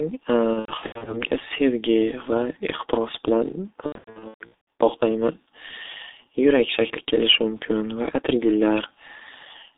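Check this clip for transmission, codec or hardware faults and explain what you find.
Two faults are present: a heavy low-rate codec throughout, and two bursts of concealed packet loss.

The G.723.1 codec colours the whole speech recording. It codes 30 ms frames at a very low rate, and the damage fits roughly 6.3 kbit/s. Its voice model updates slowly, so fast changes smear. The line band runs only from 300 Hz to 3.7 kHz. The speech sounds muffled and hoarse. Consonants blur together.

VoIP packet loss concealed by the speech codec appears from 0.53 to 1.28 s and from 3.86 to 4.63 s. In the first stretch, about 330 ms is missing, scattered across 540 ms, with gaps up to 90 ms. The second is worse: about 570 ms missing across 810 ms, with gaps up to 120 ms. The decoder fills each gap from its last pitch and filter, fading gain frame by frame. Syllables stretch into a buzzy tone or a coloured noise that fades. 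The voice stays weak and distorted briefly after packets return.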